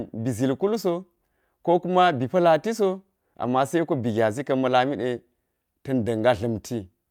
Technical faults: clock drift between sender and receiver; repeated timing corrections

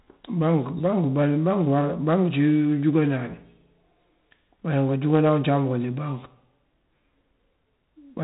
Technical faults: 4-bit ADPCM compression

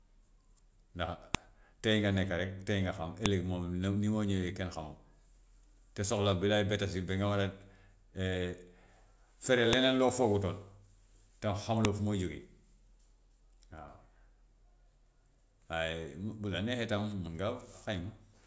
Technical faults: file header played as audio

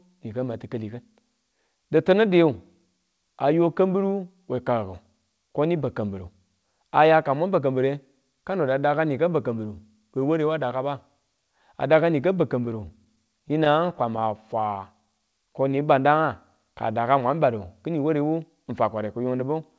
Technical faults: repeated stalls (stutter); jitter buffer slow-down; jitter buffer speed-up

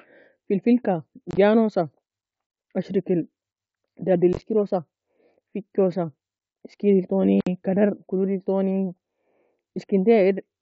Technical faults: unconcealed Bluetooth headset packet loss

